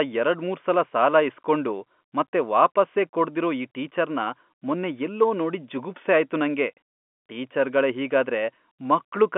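No technical faults can be heard at any point in the speech. It comes through a working G.711 telephone channel, so the sound is confined to the telephone band of roughly 200 Hz to 3.4 kHz, with nothing above about 3.7 kHz and at most a faint trace of coding noise.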